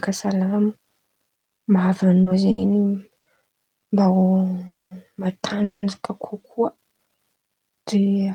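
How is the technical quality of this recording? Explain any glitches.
The recording has repeated timing glitches in the speech.

Short stalls from a late packet occur at 2.23 to 2.29 s, 2.51 to 2.61 s and 3.19 to 3.37 s. Each time a packet arrived late and the receiver stretched the last sound, by 30 ms, 70 ms and 70 ms. The sound hangs briefly with a slight buzz or dip. Nothing is lost.

Call audio freezes occur at 4.67 to 4.94 s and 5.64 to 5.86 s. The sound drags into a fading buzz or hiss. The first gap of 240 ms ends in about 180 ms of silence. The second is 190 ms with no silence. Speech then resumes where it stopped. The likely cause is packets held up in the network.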